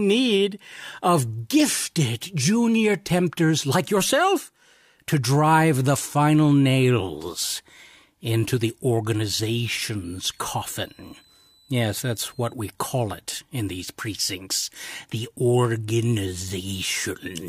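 A speech clip with a switching supply whistle from 10.04 to 12.54 s, ending just before "we call it in". A faint high whistle near 4 kHz, roughly 35 dB below the speech, drifts between 3.92 and 4.39 kHz as a switching power supply runs in an audible burst mode or beats with another supply. On a spectrogram it shows as a thin, wandering horizontal line in that band. The waveform barely changes.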